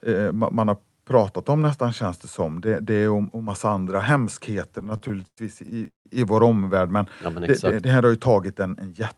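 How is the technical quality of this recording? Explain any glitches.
The recording has one clear fault, a run of repeated stalls (stutter) from 4.79 to 6.07 s, just after "om massa andra hemskheter" and ending before "i vår omvärld men". Packets arrived late, so the jitter buffer kept running dry. The receiver stretched the last sound across 15 gaps, the longest 177 ms and 438 ms in total, about a third of that stretch. Nothing is lost, but the speech drags and stammers. The call path's top end stops near 12 kHz, which fits Opus at a moderate bitrate.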